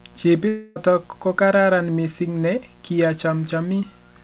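A switching spike picked up from the 60 Hz mains twice per cycle runs under the whole speech recording as mains buzz, a steady raspy tone sitting roughly 30 dB below the talker, its harmonics climbing as high as the 4 kHz ceiling of the telephone-band call path allows. From 0.48 to 0.78 s the audio stops arriving, most likely a long network dropout: the receiver stretches the last sound into a fading continuation for nearly 0.3 s, then speech resumes with that stretch missing.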